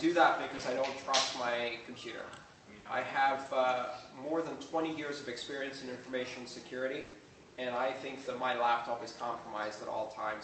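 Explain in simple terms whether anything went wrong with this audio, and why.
Yes, in three places. From 0.57 to 0.61 s there's a brief smear. This is short concealed packet loss: a sliver of the call arrived too late, so the receiver stretched the preceding sound to cover it.

At 2.79 to 2.87 s and again at 7.01 to 7.15 s, the sound turns into a held, fading tone or hiss, then jumps ahead. Each is a burst of packet loss: a run of data went missing, the receiver filled about 60 ms and then 120 ms by prolonging and turning down the last sound, and that much of the real audio is gone.

The call's codec also keeps the sound below about 8 kHz.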